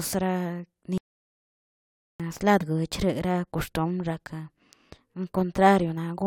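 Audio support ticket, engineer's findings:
Audio dropout to silence, 0.98 to 2.20 s. Speech cuts off mid-flow, then about 1.2 s of dead silence, no room tone at all, and it comes back mid-flow too. Likely the input side: device disconnect, failed link or stray mute upstream of the recorder, which kept writing silence. Whatever was said in that stretch is gone, not recoverable.

Broken MP3 bit reservoir, 2.60 to 2.63 s. Short glitch, roughly one frame's worth (26.1 ms, fits a single MP3 frame), with a jump ahead in the speech. Likely frames dropped from the stream, so the next frame reached back into the reservoir for borrowed bytes and decoded another frame's data instead. Worth checking the transport or the edit that cut frames.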